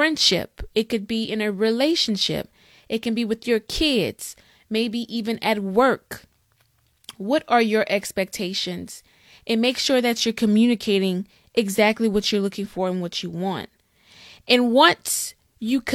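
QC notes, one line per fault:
Nothing to flag here, as this speech recording has no faults to log.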